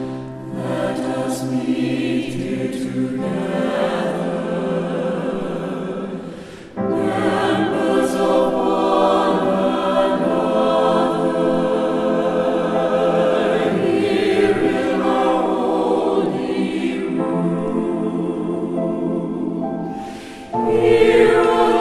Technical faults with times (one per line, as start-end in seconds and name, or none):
none